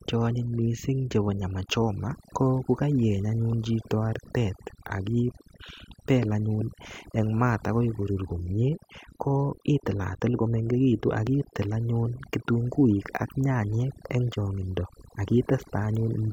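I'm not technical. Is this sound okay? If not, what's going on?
No. The whole recording suffers from overdone noise removal: a noise reduction tool was pushed too hard. Between phrases the background drops and breaks up into twinkling specks, and quieter parts of the speech get stripped away too.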